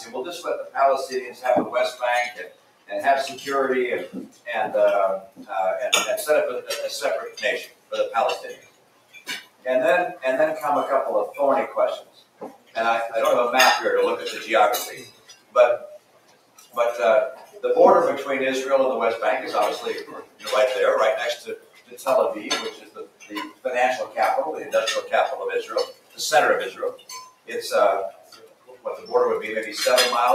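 A noise suppressor built for speech stays active on this sound throughout, treating sustained content as noise, so levels pump by around 15 dB and tails thin out. Sound cut by the noise suppressor appears at 0.0–2.92, 4.25–5.51, 7.29–10.24, 12.0–12.77, 14.89–17.61, 20.04–20.46 and 21.37–29.13 s, where held material sinks by up to about 16 dB while sharp onsets still come through.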